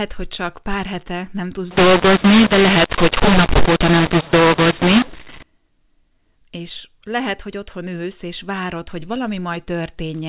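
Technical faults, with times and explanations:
1.71 to 5.43 s, mu-law and A-law mixed up: after "pár hete nem tudsz", A-law speech is decoded as mu-law. Scrambled levels make it harsh, and pauses fill with noise.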